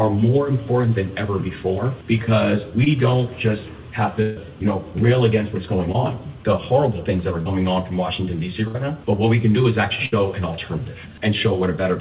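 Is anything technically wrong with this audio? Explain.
Yes. The clip has two kinds of packet-loss damage, heard through a narrowband call path with nothing above 4 kHz, which fits G.711 mu-law at 64 kbps.

Short concealed packet loss occurs at 2.84 s, 5.92 s and 7.42 to 7.48 s. At each point, a packet or two of sound arrived too late for the decoder. The receiver patched the hole by extending the preceding sound for about 20 ms, or about 36 ms at 7.42 s, then crossfaded back into real audio. Each one is a brief smear or wobble. Unlike the bursts, nothing fades out.

A burst of packet loss occurs at 4.22 to 4.38 s, 8.68 to 8.83 s and 10.06 to 10.14 s. Several consecutive packets went missing, about 140 ms at 4.22 s and about 60 ms at the other two points. Concealment stretched the last sound and let it decay, so a held buzz or fading hiss stands in for lost material. At 8.68 s, a few milliseconds were also dropped, which slightly tightens the timing. 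These bursts differ from the short losses because they are long enough for the fill to decay and for more content to go missing.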